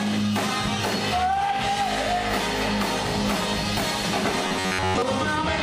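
From 4.48 to 5.02 s, robotic sound from repeated short buffers: a metallic 93.8 Hz buzz, likely an 11 ms slice looping, shows as evenly spaced spectrogram harmonics and a repeating waveform cycle.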